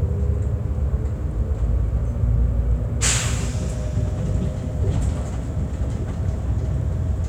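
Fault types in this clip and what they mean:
No fault types are present in this clip.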